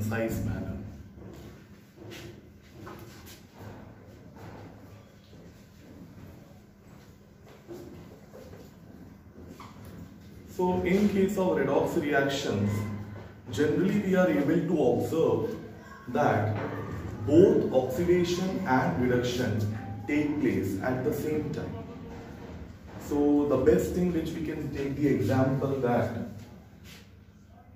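No technical faults can be heard anywhere in the audio, which holds steady throughout with no disruptions to the signal.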